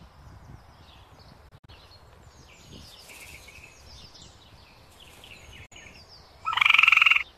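The sound cuts out twice, each time fading to silence in about 8 ms. From 1.48 to 1.69 s it breaks into short holes totalling 96 ms over a 192 ms stretch, the longest 48 ms. At 5.66 s a single 48 ms gap runs to 5.72 s. This is a digital broadcast dropout: the receiver muted when frames failed. The gap sizes fit roughly 24 ms frames, and the missing audio is lost, not delayed.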